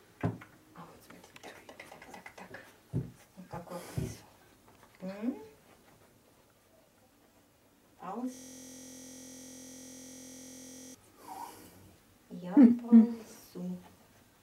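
At 8.35 s the audio locks into a system hang loop that runs until 10.95 s, roughly 2.6 seconds. The computer or its driver stalled, but the sound hardware kept replaying its ring buffer, so one 23.22 ms slice repeats exactly, over a hundred times. A loop that short fits a 1024-sample buffer, and it cycles at 43.1 Hz. Instead of a stutter you hear a steady, rough buzz pitched at that rate until playback recovers.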